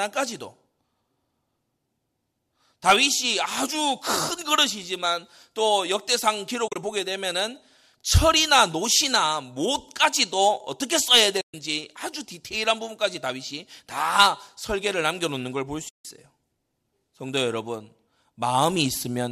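AAC frame loss with muting occurs three times: compressed frames go missing, the decoder zeroes them, and the overlapping windows fade the speech out and back in. From 6.68 to 6.76 s, about 70 ms drops out in scattered pieces over 80 ms, the longest a few tens of milliseconds, so the speech flutters. From 11.41 to 11.54 s there is a 130 ms hole, and from 15.89 to 16.05 s a 160 ms one. Both are soft-edged. The gaps fit the roughly 10 ms frames of the low-delay AAC coding, which likely also causes a faint graininess.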